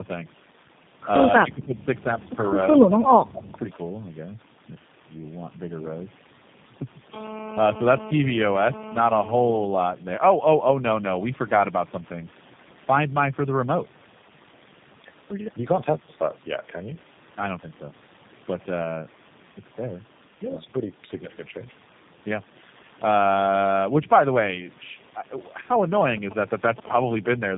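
Tandem speech coding runs from start to finish. The sound has the layered roughness of two low-rate speech coders in a row, which fits a chain like AMR-NB feeding G.729A across a G.711 link. Each coder re-quantises the previous coder's errors, so the speech is gritty, muffled and warbly, with nothing above 3.8 kHz. Below that the call microphone processing takes out the lowest bass, which is normal.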